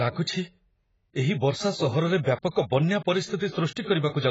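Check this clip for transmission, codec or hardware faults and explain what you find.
Two codec faults are audible in this speech clip.

AAC compression runs throughout. Nothing is left above 7.7 kHz, and the remaining band sounds heavily damaged: dull, smeared, with a warbling, fizzy texture on sibilants and held sounds. The likely cause is AAC-LC coding at a very low rate, which fits a bitrate around 16 kbps. An encoder that starved has to drop the top of the spectrum and quantise what remains coarsely against its hearing model, leaving gaps that warble.

Pre-echo occurs from 2.51 to 2.55 s, just after "ଏହି ବର୍ଷା ସହରରେ", and again from 3.36 to 3.40 s. Each time a short hiss of about 40 ms arrives ahead of a sharp onset. The transform block spreads its quantisation noise evenly across its whole length, so noise sized for the loud attack late in the block also fills the quiet stretch before it. 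The attack itself sounds softened and smeared.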